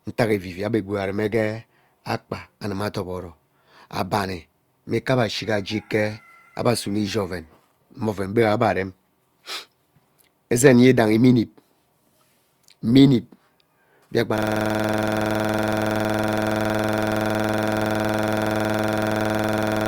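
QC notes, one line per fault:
14.38 s to end, system hang loop: a 46.44 ms slice of speech repeats identically, fitting a 2048-sample buffer the stalled system kept replaying, giving a rattling stutter at 21.5 Hz. The waveform shows one identical block tiled over a hundred times; the spectrogram shows vertical stripes at 21.5 Hz.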